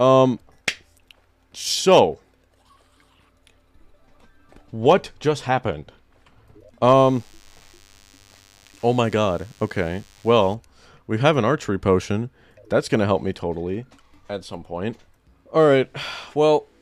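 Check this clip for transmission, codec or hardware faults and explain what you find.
One fault stands out: DECT cordless phone buzz, from 6.98 s to 10.55 s. Through that stretch a steady, thin buzz sits underneath the sound, pitched at 100 Hz but rich in harmonics, and held roughly 35 dB below the main signal. It comes from a nearby DECT handset or base transmitting a brief radio burst every 10 ms. Some stage of the audio circuitry rectifies those pulses, turning their repetition rate into an audible buzz.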